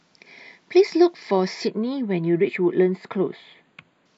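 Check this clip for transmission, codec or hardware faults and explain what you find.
One fault stands out, a channel delay (comb filtering) from 1.67 to 4.06 s. One channel arrives about a tenth of a millisecond late, which fits a lag of a few samples, and the mono sum cancels shared content at evenly spaced frequencies. The first notch falls near 5 kHz, leaving the speech hollow and dulled.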